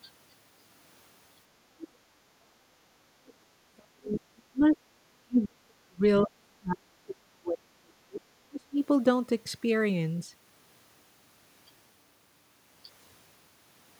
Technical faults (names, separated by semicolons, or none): other side's voice leaking through; background gated by the echo canceller; speech suppressed in double talk